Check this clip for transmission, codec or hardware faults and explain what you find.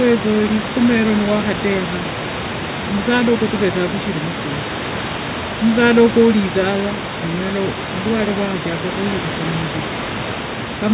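Nothing wrong can be heard in this recording.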